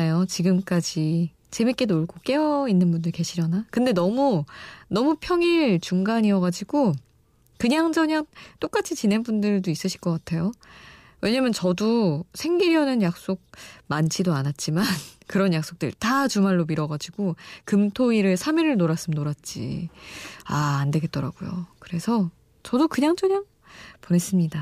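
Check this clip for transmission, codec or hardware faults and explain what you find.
Nothing wrong turns up anywhere in this speech recording.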